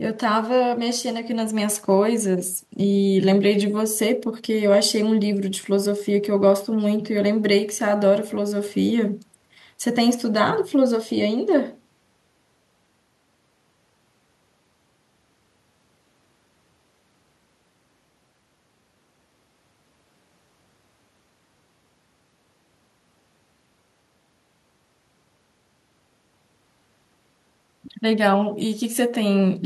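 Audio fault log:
No faults detected.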